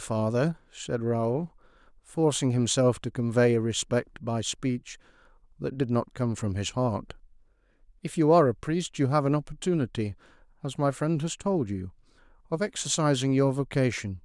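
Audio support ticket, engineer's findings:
Listened to the full speech clip and nothing stood out as a problem.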